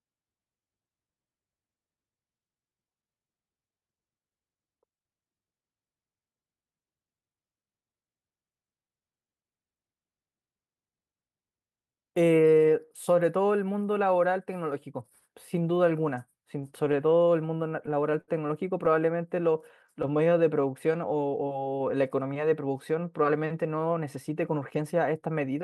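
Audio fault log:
16.31–18.30 s, repeated stalls (stutter): sixteen brief gaps, the longest 68 ms, bridged by extending the last sound, so the speech drags and stutters with nothing lost.
18.91–21.90 s, jitter buffer slow-down: repeated pitch periods stretch the speech to 92% speed at unchanged pitch, adding 247 ms; smooth drawl, not stop-start stalls.
23.70–25.61 s, jitter buffer speed-up: short pitch-period pieces removed, roughly 150 ms in all, so speech runs at 107% speed, hurried yet unchanged in pitch.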